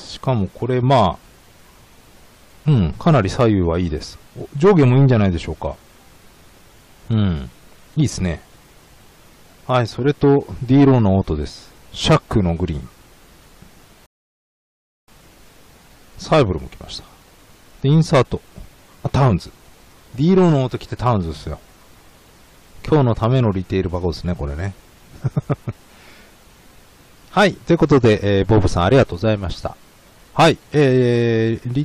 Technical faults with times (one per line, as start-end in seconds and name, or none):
14.06-15.08 rebuffering stall